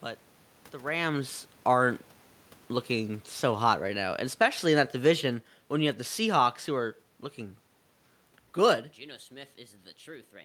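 From 2.92 s to 7.02 s, automatic gain falling pulls the level down by about 6 dB. The gain control judged the input too loud or its background noise too strong and eased its gain back. The speech sinks steadily. The room noise sinks with it.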